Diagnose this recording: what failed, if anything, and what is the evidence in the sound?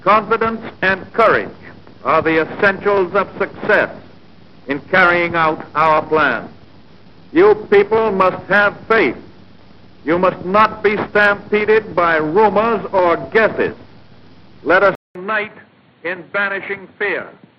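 At 14.95 s the audio drops out for 200 ms, then runs to the end about 10 dB quieter, with nothing above 4.4 kHz and a new noise floor about 30 dB down. At the driver stage, the input likely switched to a poorer device. A codec narrowing alone wouldn't add noise or shift level.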